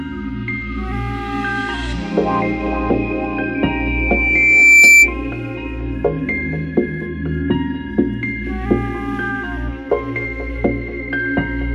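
At 3.54 s a loudspeaker feedback squeal begins: a single tone at 2.3 kHz that swells out of the sound over roughly a second and a half and peaks at about 15 dB above the program level before it stops at 5.13 s. The microphone is hearing the loudspeaker it drives, and at that one frequency the round-trip gain exceeds unity, so the tone reinforces itself on every pass until the loop is broken.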